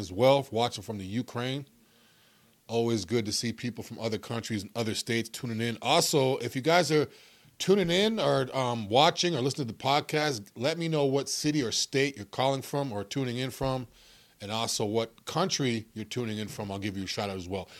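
No technical faults can be heard anywhere in the speech.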